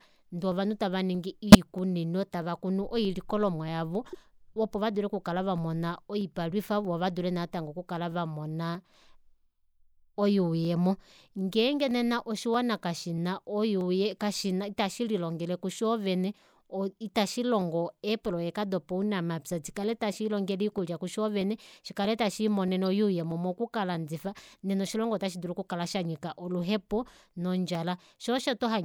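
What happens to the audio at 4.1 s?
Between 4.05 and 4.15 s a corrupt frame decoded burst occurs. Flipped bits in a few consecutive compressed frames were decoded anyway, so misread gains and codes scatter energy to the wrong frequencies, giving a brief chirpy blip peaking at about -30 dBFS. A spectrogram shows a short smear of misplaced energy in that window.

Around that moment the regular clock drift buffer slips also continue, a click every 0.63 s from 0.52 to 28.39 s. The likely cause is two devices' clocks disagreeing by a few hundred ppm, so about 15 samples are dropped or repeated at each slip. On a waveform these appear as discontinuities evenly spaced through the sound.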